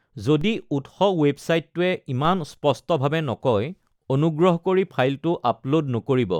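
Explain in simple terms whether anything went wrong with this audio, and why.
Yes, something went wrong: a DC step, heard twice, at 0.41 s and again at 2.25 s. Each time, the recording's baseline, the zero line the sound wave moves around, suddenly jumped to a new level, the way it does when a converter recalibrates or an input carrying an offset is switched in. That abrupt shift is heard as a short low thump. The speech itself carries on unchanged, and each offset fades away within a fraction of a second.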